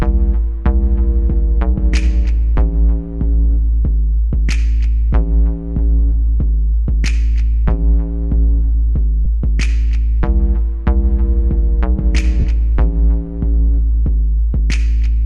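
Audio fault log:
9.25 s and 12.40 to 12.45 s, lost LE Audio frames: brief noisy smears where the decoder refilled one 10 ms frame, then 40 ms, by repeating the last spectrum with random signs.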